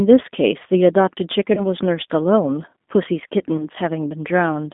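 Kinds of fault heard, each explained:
G.729 codec: The speech passed through a low-bitrate VoIP codec that models each 10 ms frame as a vocal tract filter, a pitch predictor and a few pulses. The result is plainly audible rough, slightly synthetic speech, which fits a G.729 stream at 8 kbit/s. The line is band-limited to roughly 200 Hz to 3.6 kHz, so the sound is thin and muffled, with no low bass and no crisp high detail.
VoIP packet loss concealed by the speech codec: Packets were dropped, and the decoder filled each gap by extrapolating from the last pitch and filter it received, letting the level fall away. Two such gaps are heard, from 1.55 to 1.62 s and from 3.57 to 3.66 s. Each one fits a single lost 20 ms packet. The sound briefly turns smeared and artificial, and the damage lingers slightly past the missing audio before the speech recovers.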